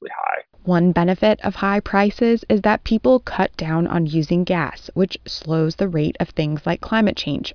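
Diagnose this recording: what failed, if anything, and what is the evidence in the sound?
Nothing failed, and there is no evidence in the sound of any fault.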